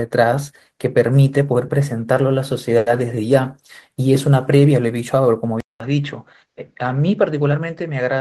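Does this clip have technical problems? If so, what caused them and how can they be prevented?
Yes. From 2.77 to 2.89 s a short stall from a late packet holds the sound 90 ms longer with nothing lost. The spectrogram shows frozen horizontal bands, and the waveform shows repeated cycles. A larger adaptive jitter buffer would absorb such late arrivals.

At 5.60 s a 200 ms silent gap appears, then the sound turns duller and a few dB quieter until the end, likely an input switched to a poorer device. The spectrogram cuts off at 7.6 kHz, with a faint new noise floor. Locking the input device during recording would prevent this.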